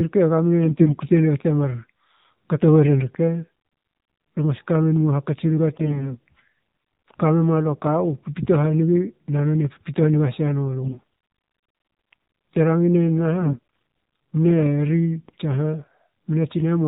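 The whole speech clip has gone through the AMR narrowband mobile codec. Nothing above 4 kHz survives, so it has that boxed-in phone sound, and the voice is buzzy and a bit synthetic, which fits one of the lower AMR-NB modes, somewhere around 7.4 kbps. At that rate there just aren't many pulses per frame to drive the vocal-tract model, so the codec damage is plainly audible. On top of that there are four bursts of AMR bit errors: 0.63–0.98 s, 5.72–6.17 s, 10.84–11.04 s and 13.40–13.59 s. Pitch and level roughly hold, but the voice turns hoarse, scratchy and gargly there. That's flipped bits in the weakly protected parts of the frames getting past the checksum, which scatters the excitation pulses and skews the finer pitch, gain and spectral values. The 10.84 s burst is the nastiest, consistent with an error rate of something like one bit in seven. The others sound closer to a few percent.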